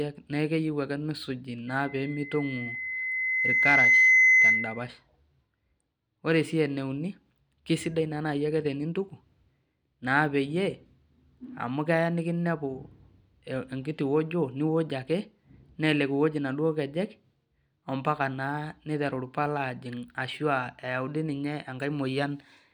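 A microphone is picking up the loudspeaker it feeds, and at one frequency the loop gain climbs past unity, producing loudspeaker feedback squeal in this speech clip. From 1.67 s to 4.92 s a pure tone at 2 kHz swells over roughly two seconds until it sits around 10 dB above the speech, a piercing whistle that keeps feeding on itself until it ends at 4.92 s.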